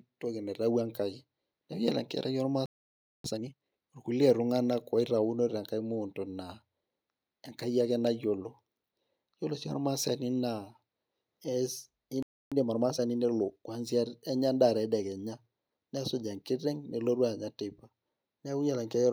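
At 2.66 s the speech stops dead for 0.59 s, and again at 12.23 s for 0.29 s. This is a playback stall, likely the player starving for data, and it shows as flat waveform gaps and blank spectrogram columns. Each gap is followed by time-compressed catch-up, with the audio hurried at normal pitch. The first runs from 3.24 to 3.82 s at 2x speed, the second from 12.52 to 13.68 s at 1.25x. On the spectrogram, formants stay at their usual height but the segments are packed tightly together.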